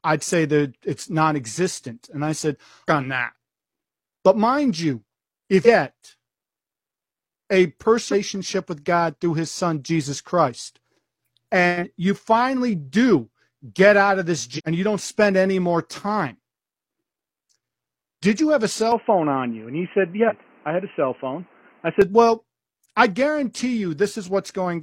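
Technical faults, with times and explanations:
2.84–2.88 s, 5.62–5.67 s, 8.08–8.14 s, 14.54–14.61 s and 20.25–20.32 s: damaged data in a compressed stream. Each is a short chirp or blip of about 50 to 70 ms. The first falls between "I said" and "on that". The second comes just after "mind you if". Corrupted bytes break a frame. The decoder misreads it, loses sync and hunts for the next frame header.
18.92–22.02 s: input switched to a poorer device, likely. Just after "did you have a", the sound turns dull and boxy at once, with no gap. Nothing is heard above 3.1 kHz. The level shifts by about 5 dB. A new noise floor sits around 40 dB below the signal. A narrower-band input with its own tone and noise fits this. Full bandwidth returns at 22.02 s.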